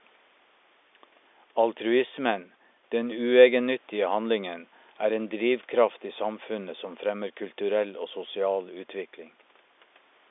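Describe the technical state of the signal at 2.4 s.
At 2.4 s the audio is intact, with no fault present at that moment.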